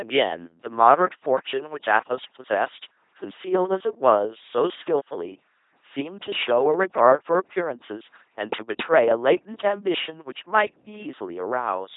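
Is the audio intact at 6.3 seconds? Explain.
No. At 6.3 seconds, as across the whole clip, the speech passes through an LPC-10 vocoder, and the heavy damage points to a rate near 2.4 kbit/s. Each moment is rebuilt from a small all-pole filter excited by either a pulse train or noise, so the voice sounds buzzing and robotic, with stray hiss or buzz where voicing is misjudged. A spectrogram shows rigid, evenly spaced harmonics or flat noise, with nothing above 3.8 kHz.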